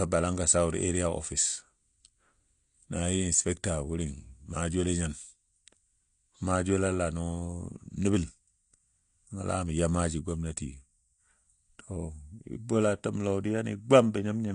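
From start to finish, the speech sounds dull and smeared. Nothing is present above about 9.8 kHz, so the top of the spectrum is simply gone. Sibilants have a fizzy, unstable edge, and held sounds warble. The damage is plainly audible throughout. The likely cause is AAC compression, with an AAC-LC encoder running short of bits. It then cuts high frequencies and coarsely quantises the rest. The texture fits a bitrate near 32 kbps.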